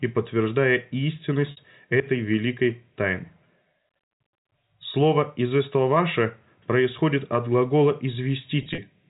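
Packet loss with pitch repetition hits at 1.51 to 1.57 s, just before "этой великой тайны", where the 60 ms gap is bridged by a held, buzzy repeated pitch period. It recurs from 8.62 to 8.78 s as 90 ms of scattered losses, each run at most 30 ms, giving brief held, buzzy notes.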